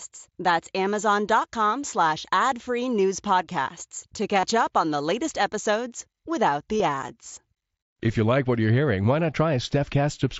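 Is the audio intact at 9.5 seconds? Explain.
Yes, the speech at 9.5 seconds is intact, with no fault at that moment.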